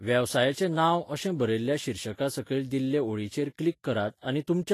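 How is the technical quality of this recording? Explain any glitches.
The speech is plainly degraded throughout by what is likely Vorbis compression. From start to finish the treble is gone above about 14.2 kHz, and the upper range left below that limit turns hissy and grainy, with roughened tones and softened consonant attacks. The encoder keeps a smooth spectral outline but quantises the fine high-frequency detail so coarsely that it becomes noise of similar energy, which fits a low bitrate near 33 kbps. A plain low-pass filter would sound dull but clean, not grainy.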